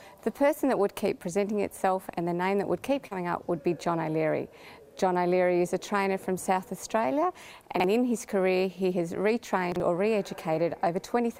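At 3.07 s there is short concealed packet loss, lasting until about 3.13 s. About 40 ms of audio never arrived in time. The receiver covered roughly 34 ms of that gap by extending the sound just before it, then faded back into the real signal. The result is a brief smear or wobble. Whatever was lost there cannot be recovered.

Chunks out of order follow at 7.76 to 7.84 s and again at 9.72 to 9.80 s. In each case a 40 ms chunk came one chunk late. It plays after the chunk that should follow it. No audio is missing, but the sequence is swapped. Three hard joins result each time. Each spot is heard as a short jumbled moment.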